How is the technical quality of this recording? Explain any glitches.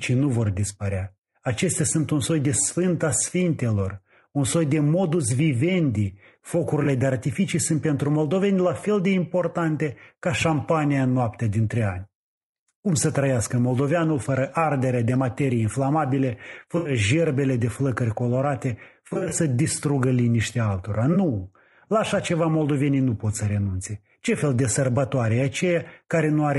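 The speech is degraded throughout by codec damage, with four brief dropouts patched over by concealment.

Low-delay AAC compression: the whole clip sounds rough and grainy, with noise between harmonics and a dull top band. This likely comes from AAC-ELD at 32 kbps. Its short frames resolve pitch poorly.

AAC frame loss with concealment: the decoder fills gaps from the last good spectrum, giving smeared, noisy patches. At 6.83 to 6.86 s, about 20 ms is lost just before "de artificii sunt pentru". At 16.77 to 16.91 s, an 80 ms gap sits between "ardere de materii inflamabile" and "gerbele de flăcări colorate". At 19.07 to 19.33 s, 140 ms of loss is scattered over 240 ms, in runs of around 40 ms at most. At 21.13 to 21.16 s, about 20 ms goes missing after "distrugă liniștea altora".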